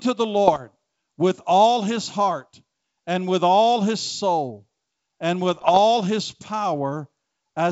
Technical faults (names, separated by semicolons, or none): bit errors on an ADPCM link